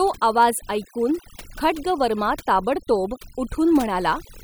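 From the first second to the last, this speech has overdone noise removal: the noise reduction was pushed so hard that it keeps shutting off individual frequency bands near its noise estimate. So the background drops and breaks up into twinkling specks, and quiet parts of the voice are cut away with it.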